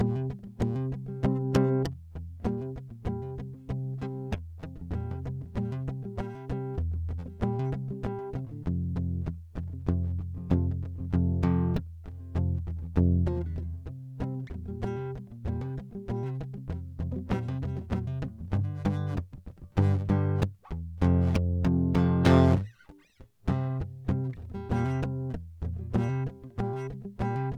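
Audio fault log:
No fault is heard anywhere in this music clip. Nothing in it calls for an entry in this log.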